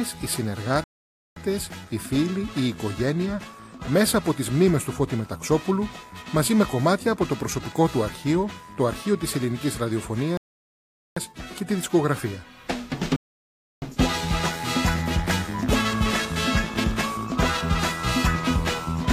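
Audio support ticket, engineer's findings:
Rebuffering stall at 0.84–1.36 s, 10.37–11.17 s, 13.16–13.82 s: playback buffer underrun. Audio drops to silence, then resumes at the same point, with nothing skipped. Adds 0.52, 0.79, 0.66 s.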